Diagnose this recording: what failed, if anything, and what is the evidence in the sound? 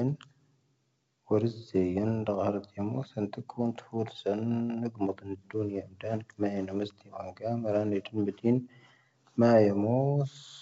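Nothing failed in this recording: the sound gives no evidence of any fault, and the G.722 wideband telephone coding carrying the speech is working normally.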